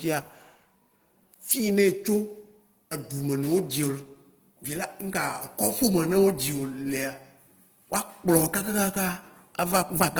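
Throughout, the speech sounds grainy and rough, likely from Opus compression at a very low rate near 16 kbps; the spectrogram shows noise-filled bands reaching about 20.2 kHz.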